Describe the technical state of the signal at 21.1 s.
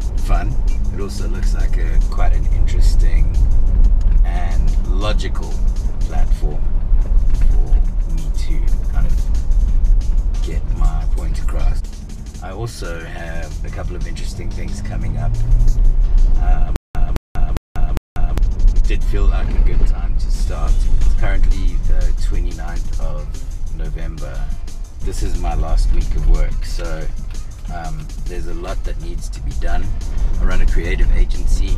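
At 21.1 s the signal is intact, with no audible dropout, distortion, glitch or other fault at that moment.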